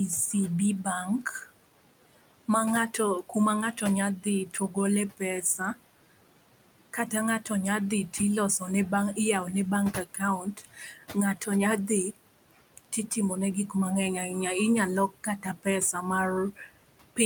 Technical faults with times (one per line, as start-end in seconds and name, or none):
0.00-17.26 noise suppressor artifacts
2.48-5.78 speech cut by the noise suppressor
9.93-13.09 speech cut by the noise suppressor
15.10-15.95 speech cut by the noise suppressor
16.52-17.18 speech cut by the noise suppressor